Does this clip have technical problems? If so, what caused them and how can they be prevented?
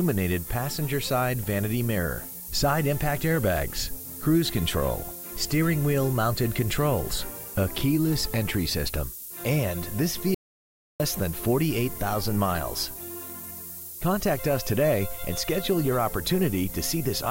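Yes. A steady, thin hiss runs through the whole clip, strongest at the top of the band and sitting only about 10 dB below the sound. This is low bit depth with noise shaping: the audio was reduced to about 5 bits, and the shaping pushed the large rounding error upward in frequency, so it is heard as bright hiss instead of grainy distortion. Keep audio at 16 or 24 bits through every stage and reduce bit depth only once, at final export.

From 10.35 to 11.00 s the sound stops dead for about 0.65 s, leaving silence with no room tone. Then it resumes mid-flow. This is an audio dropout to silence, and the likely cause is a brief loss of the input signal, such as a loose connection or failed link, while the recorder kept writing silence. Secure cables and wireless links, and monitor the input live while recording.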